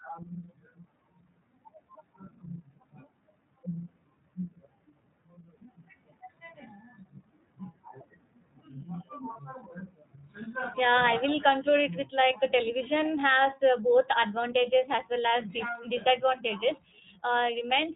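From start to end the speech passes through the iLBC codec, and its damage is plainly audible. Everything above 4 kHz is gone, so sibilants lose their edge, and voiced sounds take on a slightly rough, synthetic grain. The coding works in self-contained 30 ms frames, which fits the 13.33 kbps mode.

At 9.33 to 9.37 s one 30 ms frame is lost. The iLBC decoder covers the lost iLBC frames by repeating the last pitch cycle blended with noise, so instead of a click or a silent hole there is a brief held, faintly buzzy vowel-like sound. What marks it as iLBC concealment rather than loss in a predictive codec is the recovery: the voice is right again almost at once.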